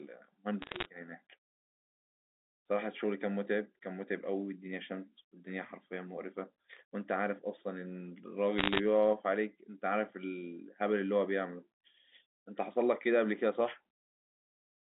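At 0.62–0.86 s and 8.58–8.80 s, bit errors on the digital phone line corrupt single samples, causing crackling ticks that show as lone waveform spikes and thin vertical spectrogram streaks.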